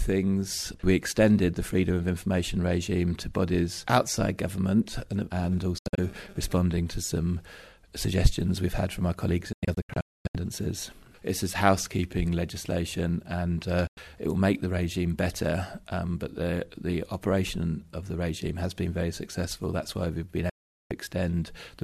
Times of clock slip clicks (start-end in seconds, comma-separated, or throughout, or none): none